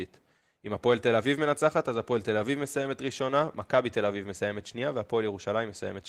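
Nothing in this bit of speech stands out as a technical fault, and the Opus voice coding carrying it sounds about what you'd expect from a stream of roughly 20 kbps.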